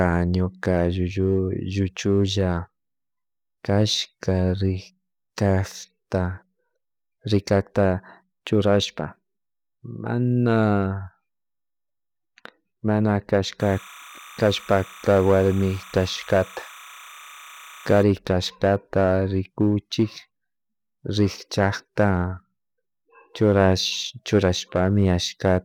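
Speech with timecode bleed from 13.60 to 18.03 s: leaked 29.97 fps linear timecode chirps roughly 20 dB below the voice, drawing flickering spectrogram bands near 1 and 2 kHz.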